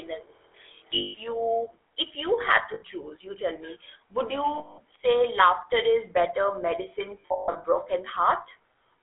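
The whole clip has GSM full-rate codec damage. The speech is buzzy and gravelly, squeezed into 300 Hz to 3.5 kHz, which fits a 13 kbps GSM link. There are lost GSM frames at 0.94 s (200 ms), 2.74 s (80 ms) and 4.58 s (200 ms), where the last good sound rings on metallically. From 7.2 to 7.65 s there's a scattered cluster of losses, the longest run about 150 ms.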